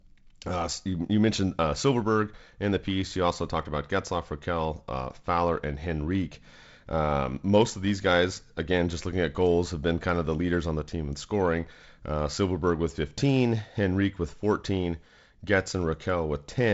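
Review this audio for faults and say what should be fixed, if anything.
Nothing here needs fixing; no faults can be heard.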